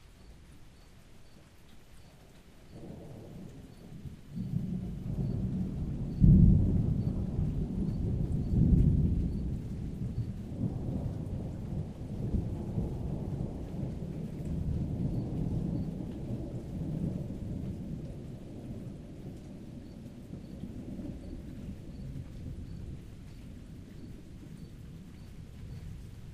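Current drawn by the USB bus in 1 ms frames leaks into the audio through power or ground, producing USB whine from 1.79 to 5.05 s: a fixed-pitch tone built on 1 kHz, strongest at its 3 kHz multiple, sitting roughly 45 dB below the sound.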